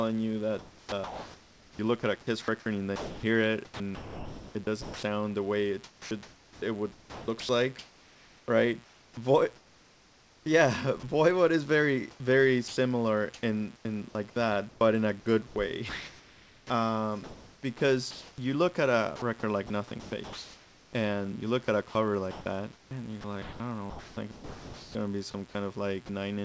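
Speech carried over a G.722 call path, with nothing above 8 kHz, is marked throughout by mains buzz: a steady, raspy 60 Hz harmonic buzz roughly 25 dB below the speech, constant rather than tracking the talker. The sound is chopped by the voice detector from 0.59 to 5.03 s (before "the way it"), 5.84 to 11.03 s (between "the way it" and "is very"), 12.11 to 20.93 s (before "and you look at") and 21.89 to 24.95 s. Within each stretch the detector likely toggled repeatedly, so quiet syllables and word edges flicker into synthetic comfort noise, about 1.5 to 3.1 s in total per stretch. A single sound dropped by the voice detector at 26.06 to 26.09 s is a brief gap filled with steady comfort noise. It is likely one missed trigger rather than the repeated switching heard earlier.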